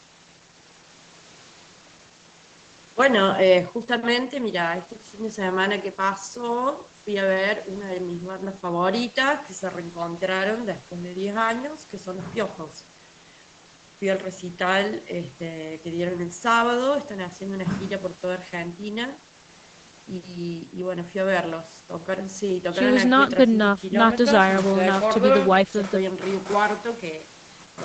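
The speech carries no technical faults, with its content stopping at about 8 kHz as expected from the call microphone processing and the Opus call path it passed through.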